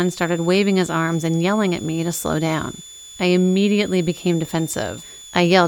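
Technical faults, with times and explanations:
Throughout: switching supply whistle, a high tone wandering between 3.4 and 3.6 kHz, roughly 20 dB below the speech, from a switching power supply running in an audible burst mode or beating with another.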